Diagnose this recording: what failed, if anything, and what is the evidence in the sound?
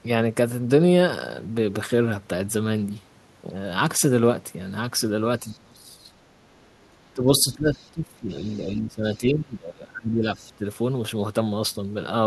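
Call processing failed, with speech suppressed in double talk. The sound dips from 5.4 to 6.13 s, and again from 7.14 to 10.64 s. The drops reach about 25 dB and about 20 dB. The likely cause is an echo canceller attenuating both talkers at once.

The other side's voice is leaking through. Faint scraps of a second voice appear at 5.52 to 5.58 s, 7.75 to 7.91 s and 8.46 to 8.59 s. They sit roughly 30 dB or more below the speech. Loudspeaker echo likely escaped the same canceller.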